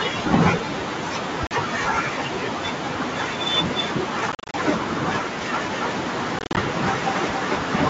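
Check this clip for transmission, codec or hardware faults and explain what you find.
Packet loss on an ADPCM call hits three times. At 1.47 s, about 40 ms drops out. From 4.32 to 4.55 s, 150 ms is lost in bursts, and from 6.39 to 6.58 s, 120 ms is lost, with no single gap longer than 40 ms. The lost packets become hard-edged silences. Afterwards the decoder's predictor and step size no longer match the sender's, so the wideband G.722 sound comes back slightly distorted before it settles.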